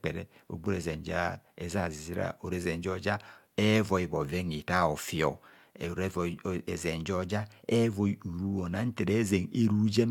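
No technical faults can be heard anywhere in this speech recording. There is nothing to place on the timeline and no event to describe.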